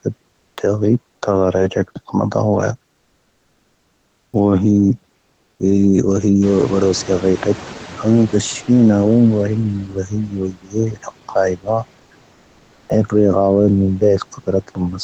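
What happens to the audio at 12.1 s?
Comfort noise in place of the background appears from 12.03 to 12.11 s. For about 80 ms the real room sound gives way to a steady, featureless hiss about 3 dB quieter. This is likely the sender's voice detector pausing transmission, which points to Opus DTX, while the receiver synthesises noise to fill the gap.

Noise suppressor artifacts also run through this moment, as they do across the whole clip. The suppressor pulls the background down by about 12 dB in pauses, so the noise floor dips between speech and swells back underneath it, pumping rather than holding steady.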